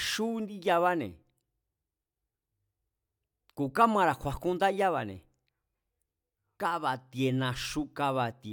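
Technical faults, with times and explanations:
No technical faults can be heard in this speech recording. Nothing in the audio calls for a time or an explanation.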